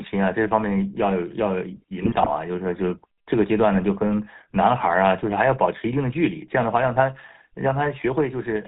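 The whole speech clip carries the sound of the GSM full-rate codec. Nothing passes above 4 kHz. The vocal tract is modelled and driven by sparse, regular pulses. That leaves a plainly audible buzzy, gravelly roughness, which fits the 13 kbps GSM stream.

From 2.02 to 2.35 s, GSM bit errors break through. Corrupted filter, pitch and gain values reach the decoder. The spectrum twists and the level jumps frame by frame. The speech turns to squawks, pops and gargling. This points to roughly sixteen damaged frames.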